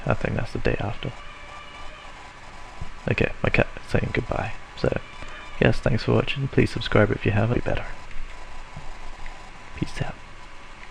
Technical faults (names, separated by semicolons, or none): stream segment skipped